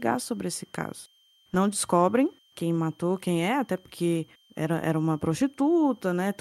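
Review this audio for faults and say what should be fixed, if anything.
A switching supply whistle runs under the speech for the whole clip: a faint high tone wandering between 3.13 and 3.17 kHz, roughly 40 dB below the speech. A nearby switch-mode power supply is running in an audible burst mode or beating with another supply, and its drift follows changes in its load. On a spectrogram it shows as a thin, slightly wavering horizontal line near 3.1 kHz; the waveform hides it. Power the recording chain from a linear supply or a well-filtered, separated one.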